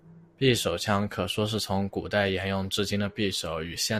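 No technical faults occur at any point in the recording.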